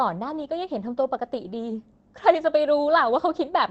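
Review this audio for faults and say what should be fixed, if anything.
A lost packet rebuilt from error correction at 2.35 to 2.37 s: one 20 ms frame was replayed from Opus's low-bitrate backup copy, so there is no gap in the waveform. On a spectrogram it shows as a short, grainier, noisier slice. Reducing packet loss on the network path, or giving the jitter buffer more headroom, would prevent it.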